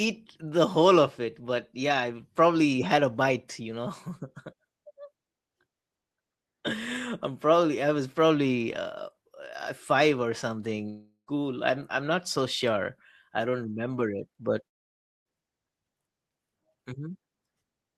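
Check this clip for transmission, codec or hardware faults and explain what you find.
Two breaks in the speech stand out, both consistent with a long network dropout.

Long network dropout, 10.89 to 11.29 s and 14.67 to 15.27 s: the likely cause is that no audio arrived for roughly 0.4 s and then 0.6 s, so the receiver filled the gap by extending the last sound. In the first, that fill fades to a buzzy tail with about 0.11 s of silence. The second collapses to near silence almost at once. Speech resumes afterwards with the missing stretch gone.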